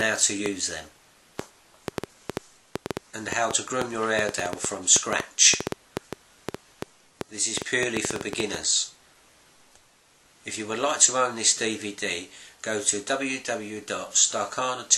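A train of clicks runs from 0.01 s to about 8.56 s: roughly fifty sharp, similar-shaped ticks at an average of 5.15 per second but unevenly spaced, standing around 20 dB above the surrounding audio and audible through quiet gaps too. On a waveform they appear as thin spikes towering over the signal; a spectrogram shows them as narrow vertical broadband lines. The likely cause is electrical interference or a faulty connection or power supply injecting pulses.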